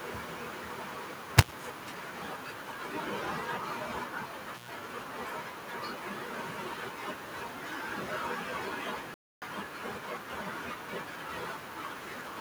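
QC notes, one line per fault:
Throughout: echo with no canceller. The far end is playing the call over a loudspeaker, and its microphone sends that sound straight back with nothing removing it. The return trip through the network delays it by roughly half a second, so the speech is trailed by a second copy about 17 dB quieter. Because it passed through a speaker, a room and a microphone, that copy sounds thin, a faint shadow behind each phrase.
1.38–1.52 s and 4.54–4.71 s: intermittent contact. A loose plug or cable briefly loses connection, breaking the signal path for about 70 ms in the first event and about 108 ms in the second. Each dropout begins and ends with a crackle as the contact opens and then closes again. While the path is open the speech disappears and only a faint hiss remains. Both are short, abrupt holes rather than smooth fades.
9.14–9.42 s: playback stall. The sound stops in mid-flow for about 0.28 s, leaving complete silence with no crackle or hiss, and then continues. 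The likely cause is that the player ran short of data or its output thread was held up, so nothing was sent to the output until it caught up. The clean digital silence and the sudden restart set this apart from the contact faults earlier in the clip.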